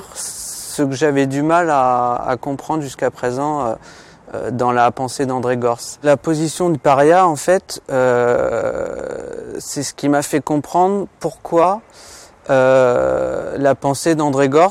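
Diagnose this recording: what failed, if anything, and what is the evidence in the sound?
Four brief smeared blips where the sound lurches forward, at 4.33, 6.74, 11.63 and 13.16 s, the first two losing roughly a tenth of a second. This is compressed frames skipped at the codec stage: whole 21.3 ms frames never decoded, with overlap softening each join.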